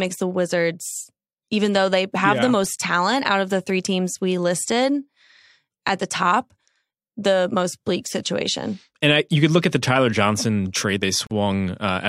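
At 11.27 to 11.31 s there's a gap at a join of encoded pieces: a 44 ms silence where separately encoded chunks meet, with smeared edges before the speech carries on.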